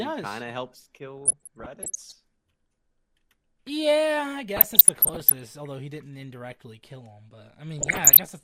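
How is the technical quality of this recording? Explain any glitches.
The speech is marred by DAB burbling in three stretches: 1.18 to 2.14 s, 4.57 to 5.40 s, and 7.79 to 8.23 s. Weak reception lets bit errors, around half a percent and near one percent in the last burst, slip past error correction into the MP2 data. Corrupted samples put short blips of noise in single sub-bands, and corrupted scale factors throw sub-bands up or down in level for up to a frame. A spectrogram shows scattered short rectangular blocks flaring in isolated frequency bands, and the waveform shows brief envelope spikes.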